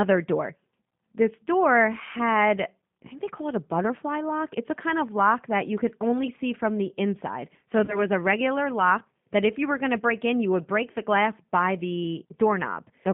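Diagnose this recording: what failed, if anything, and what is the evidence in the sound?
G.729 codec damage runs through the whole clip, at the codec stage. The speech sits in a narrow band from about 150 Hz to 3.6 kHz, with nothing above, and has a plainly audible rough, synthetic edge. That texture fits an 8 kbit/s G.729A coder, which does not send the waveform. It sends a vocal tract filter, a pitch predictor and a few pulses per frame, and the decoder rebuilds speech from those.

VoIP packet loss concealed by the speech codec occurs at the network stage, from 7.85 to 8.03 s. About 30 ms of audio is missing, which fits a single lost packet. The gap is filled by a stretched continuation that fades. The decoder repeats its last pitch and filter at falling gain. Because each frame builds on the previous one, the sound stays weak or distorted for tens of milliseconds or more after the loss.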